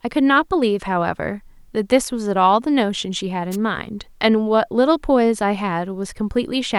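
At 3.51 s a wireless microphone noise hit cuts across the speech for about 56 ms, ending near 3.57 s. The analogue FM radio link briefly faded as reflected signals cancelled, so receiver noise rose and broke through as a short swish of static over the voice. Unlike a digital dropout, which leaves silence or a repeated fragment, this fills the gap with hiss rather than muting it.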